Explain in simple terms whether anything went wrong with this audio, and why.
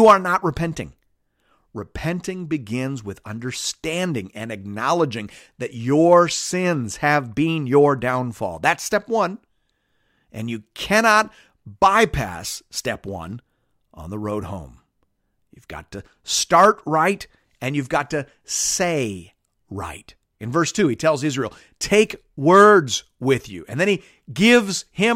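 Nothing went wrong here; no problems can be heard.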